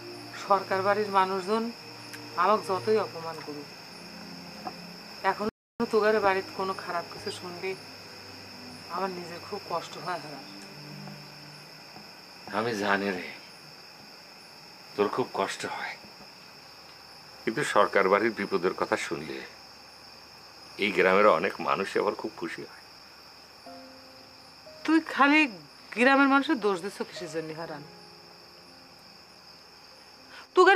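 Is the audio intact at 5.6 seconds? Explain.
No. At 5.6 seconds the sound is caught in a playback stall lasting from 5.49 to 5.80 seconds, about 310 ms. The output simply goes silent mid-flow, then resumes. Likely cause: the player ran out of buffered data or its thread was briefly blocked.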